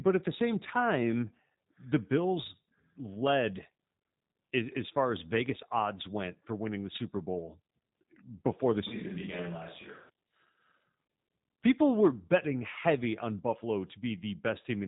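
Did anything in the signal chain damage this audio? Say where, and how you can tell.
Yes, at the codec: G.729 throughout. The speech sounds rough and synthetic, with nothing above 3.8 kHz, which points to 8 kbit/s pulse-coded frames rebuilding the voice.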